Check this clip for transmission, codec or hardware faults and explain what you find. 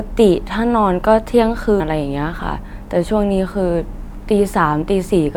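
Two short glitches from damaged data in a compressed stream, at 1.77 to 1.81 s and at 4.04 s. Corrupted bytes make the decoder misread frames and resynchronise, producing brief glitches in the speech.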